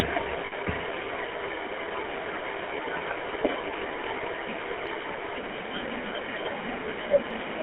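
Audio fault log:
throughout  GSM full-rate codec: the sound is buzzy and gravelly, with a plainly audible rough edge and nothing below 300 Hz or above 3.4 kHz. The coder rebuilds it from a vocal-tract model driven by sparse, regularly spaced pulses, which fits a 13 kbps full-rate stream.
0.46 to 0.53 s  lost GSM frames: for about 60 ms the sound freezes into a rough, metallic ring instead of moving on. The decoder filled the gap by repeating the last good frame's settings, which fits three lost 20 ms frames.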